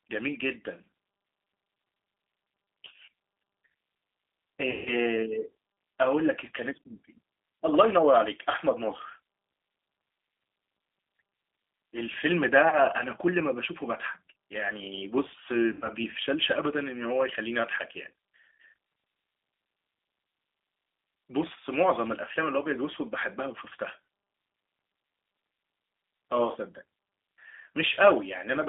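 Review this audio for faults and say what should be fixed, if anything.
Throughout the speech there is a narrow, slightly rough and synthetic quality. Nothing below about 300 Hz or above 3.6 kHz comes through, and that band, with the plainly audible coarseness, fits a G.729 codec, here G.729A at 8 kbit/s. That codec doesn't store the waveform. It rebuilds each 10 ms frame from a vocal tract filter, a pitch predictor and a few pulses, which gives speech its thin, buzzy edge. Preventing it means carrying the call on a wideband codec such as G.722 or Opus instead.

Three dropouts turn the speech into a stretched, buzzy tone or coloured noise that fades before the sound recovers: 4.71 to 4.94 s, 12.69 to 12.78 s and 15.73 to 15.90 s. These come from VoIP packet loss concealed by the speech codec. About 150 ms, 30 ms and 90 ms of audio went missing, which fits five, one and three lost 30 ms packets. 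The decoder repeated its last pitch and filter at falling gain. Because each frame builds on the previous one, the speech stays weak slightly beyond each gap. A better network path, a larger jitter buffer or forward error correction would prevent these gaps.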